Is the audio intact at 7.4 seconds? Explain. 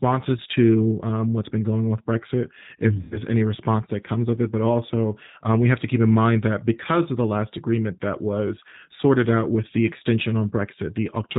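No. G.729 codec coding runs through the whole speech clip, so 7.4 s carries it too. The speech is rebuilt from a short vocal-tract filter, a pitch predictor and a sparse set of pulses per 10 ms frame, at a rate that fits 8 kbit/s. Everything above 4 kHz is gone, leaving the voice muffled, and the damage is plainly audible as a rough, slightly synthetic buzz with warbling on any background sound.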